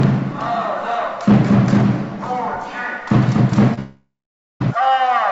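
At 3.74 s a packet arrived late and the jitter buffer ran dry, so the receiver held the last sound for about 34 ms before resuming: a short stall from a late packet. From 3.79 s to 4.62 s, packets were likely held up in transit, causing a call audio freeze. The final sound stretches into a fading buzz, then about half a second of silence, and resumes 0.81 s late with nothing lost. Throughout, the call-path codec leaves nothing above 8 kHz.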